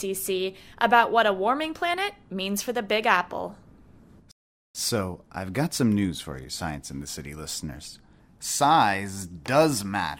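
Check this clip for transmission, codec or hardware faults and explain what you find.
One transmission fault is present, a rebuffering stall. From 4.31 to 4.75 s the speech halts into silence because playback exhausted its downloaded audio and waited for more. It resumes exactly where it stopped, adding about 0.43 s, unlike a dropout, which would skip material.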